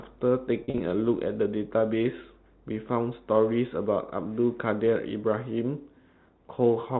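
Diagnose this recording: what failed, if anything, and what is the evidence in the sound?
Packet loss with pitch repetition, between 0.64 and 0.80 s, at the network stage. About 100 ms of audio goes missing, scattered in short gaps over roughly 160 ms, with the longest gap 40 ms. That pattern fits around five lost 20 ms packets. Each gap is bridged by repeating the last pitch period, so the speech briefly sounds held and buzzy rather than dropping out. It then cross-fades back in. The G.711 narrowband telephone sound is unaffected.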